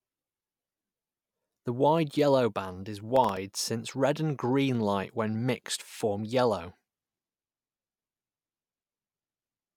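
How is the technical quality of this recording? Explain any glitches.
The recording has one glitch, a burst of processor overload crackle from 3.16 to 3.37 s, after "wide yellow band is" and before "since red and green". The processor fell behind and missed several deadlines for very short buffers, each well under a millisecond. Each miss left a brief hard-edged gap of silence, heard together as gritty crackle over the speech.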